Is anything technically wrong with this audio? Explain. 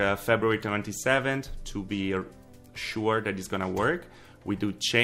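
Yes. Clock slip clicks, 0.15 to 4.99 s: a soft tick rattle every 0.05 s or so. Likely unsynced clocks about 400 ppm apart, each slipping one sample.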